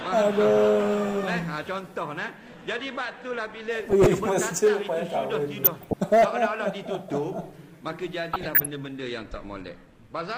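DAB burbling shows up three times, at 3.8 to 4.06 s, 5.64 to 5.94 s and 8.33 to 8.66 s. Bit errors, at roughly 0.4 to 0.5 percent, slipped past error correction into the MP2 data, so wrong samples give short blips of noise in single sub-bands and wrong scale factors make sub-bands jump in level for up to a frame.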